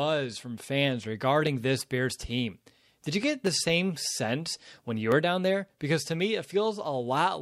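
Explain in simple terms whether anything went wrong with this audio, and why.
Dropped samples, at 3.47 s after "you get" and at 5.12 s before "were down there": a tiny sliver of audio, likely under a millisecond, went missing, making the sound jump and produce sharp clicks.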